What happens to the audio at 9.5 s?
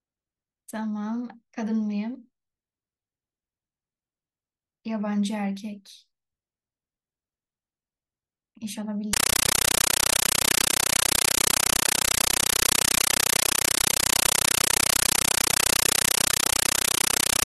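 From 9.13 s to the end at 17.46 s, a compressed stream is played as audio. What appears to be a Dolby Digital bitstream is passed through as plain samples, undecoded, so each frame becomes a 9.3 ms noise burst 31.25 times a second. The speech is replaced by very loud, chattering static.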